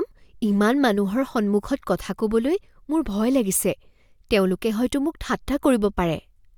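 No technical faults are audible in the recording.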